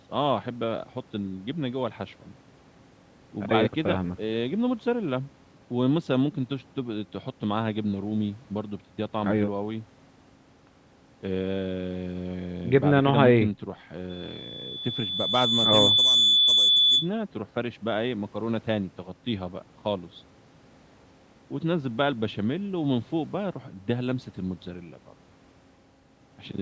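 At 14.09 s a loudspeaker feedback squeal starts, a 3.5 kHz tone building for roughly two seconds to about 10 dB above the speech before cutting at 17.10 s.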